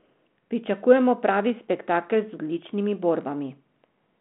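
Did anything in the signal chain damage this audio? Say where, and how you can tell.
No, the speech sits in a telephone band of about 150 Hz to 3.4 kHz with nothing above 3.8 kHz, consistent with a 32 kbit/s G.726 link working as intended and adding only light coding grain, and no stage in the chain shows damage beyond that.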